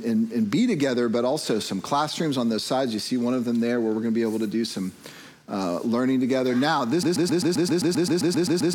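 At 7.03 s the audio locks into a broken-record loop and never gets out: a tiny slice of about 131 ms repeats back to back, 13 times, right through to the end. It comes across as a fast, mechanical stutter with no forward movement. Most likely the player or stream stalled and just kept replaying the last fragment it had buffered, so whatever should have followed is simply gone.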